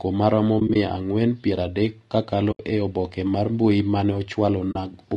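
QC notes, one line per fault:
Throughout: low-delay AAC compression. The speech sounds rough and grainy, with a hiss filling the gaps between harmonics and a thin, somewhat synthetic top end. This is likely AAC-ELD at around 32 kbps, whose short frames resolve pitch harmonics poorly and starve each band of bits.
0.59–0.76 s: AAC frame loss with muting. Just before "ang'wen piero adek kakalo" the sound drops out in several brief, soft-edged holes spread over 160 ms, about 60 ms missing in all, each gap short. Lost frames were decoded as silence, and overlapping windows fade each gap out and in.
2.51–2.60 s: AAC frame loss with muting. Between "ang'wen piero adek kakalo" and "e obke mar" there is a single smooth 80 ms hole where the decoder zeroed the missing frames' spectrum and the window overlap faded the sound down and back up.
4.71–4.76 s: AAC frame loss with muting. A short, soft 40 ms dropout where the lost frames were muted, faded in and out by the overlapping windows rather than cut sharply.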